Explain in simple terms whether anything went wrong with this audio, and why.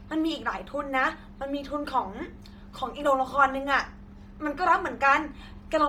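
The speech was likely squeezed hard by Bluetooth LC3 compression, the codec in newer Bluetooth earbuds, which cuts sound into 10 ms slices and throws away much of the high end. Throughout, it sounds breathy and grainy, with hiss replacing real detail.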